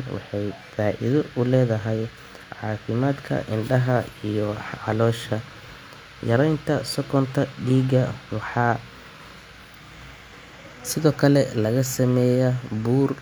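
No technical faults can be heard anywhere in this speech recording.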